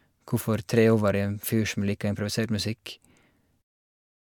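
No faults found in this speech; the level simply eases down from around 3.5 s to 3.63 s with no click or hard edge.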